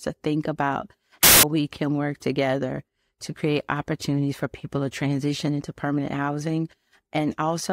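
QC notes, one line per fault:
1.23–1.43 s, samples built from the wrong bytes: after "to think about", a 0.2 s burst of loud, harsh broadband noise until "we can work together". The bytes of each sample were misassembled, so the fast-changing low bits became the dominant part of every value.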